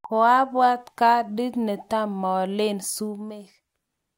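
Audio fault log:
2.96–3.42 s, zipper noise: right after "kandi netamolen" the level drops by roughly 10 dB, but it gets there in lots of tiny unsmoothed jumps, around 150 a second, instead of one continuous ramp. Each jump leaves a small click, and at that rate the clicks run together into a buzzy ticking on the sound for about half a second. That step rate fits a gain update once per buffer.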